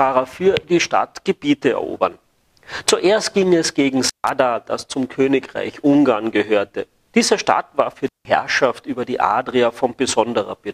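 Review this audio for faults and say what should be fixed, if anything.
Two dropouts from an intermittent contact need fixing. The first runs from 4.04 to 4.30 s, with the line open for 145 ms. The second runs from 8.06 to 8.26 s, open for 167 ms. Each time the sound cuts out abruptly, with crackle at both edges and faint hiss in the gap. A loose cable or plug is briefly breaking the signal path, then reconnecting. Reseat or replace the suspect cable and connectors, and secure them against movement.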